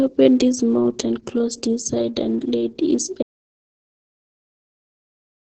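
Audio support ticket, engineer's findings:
Muffled, hoarse, slightly robotic speech throughout, nothing above 11.4 kHz. Heavy Opus voice compression, SILK coarse excitation coding, consistent with roughly 10 kbps.

Audio dropout to silence from 3.23 s to end, no room tone. Input likely lost (device or link), with the encoder still writing silence.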